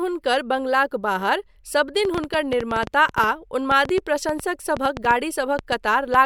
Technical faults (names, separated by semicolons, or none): train of clicks